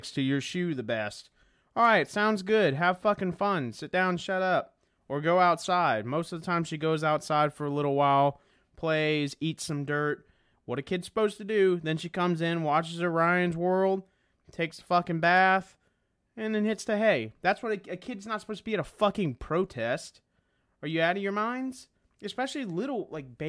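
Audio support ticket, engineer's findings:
Engineer's findings: no fault found in the speech clip.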